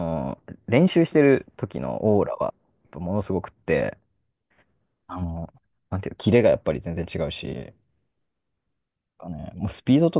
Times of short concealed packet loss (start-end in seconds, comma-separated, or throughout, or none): none